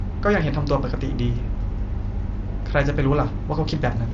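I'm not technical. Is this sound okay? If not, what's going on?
Yes, nothing is wrong with this speech recording. It sounds like a normal Bluetooth headset call using the mSBC codec, so the highest frequencies stop around 7.6 kHz and there is a slight grain, as is typical for that kind of link.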